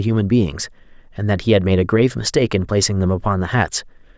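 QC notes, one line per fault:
No faults heard anywhere in this speech recording.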